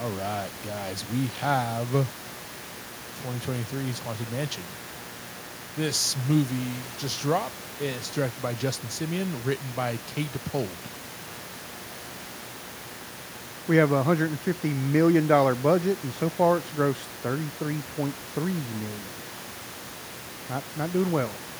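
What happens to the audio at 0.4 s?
At 0.4 s you're hearing mains buzz, and it isn't confined to that moment: it runs the whole length of the speech. Something like a dimmer, rectifier or unshielded lead is letting sharp switching spikes through twice per cycle of the 60 Hz supply, so you get a dense stack of harmonics climbing well into the kHz range. That's the steady, raspy edge sitting roughly 20 dB under the speech, separate from the room noise at about 19 dB under the speech.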